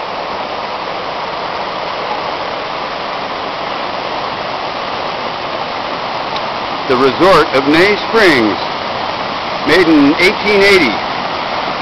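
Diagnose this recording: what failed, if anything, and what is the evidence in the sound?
Nothing stood out on listening that would point to a failure at any stage of the chain.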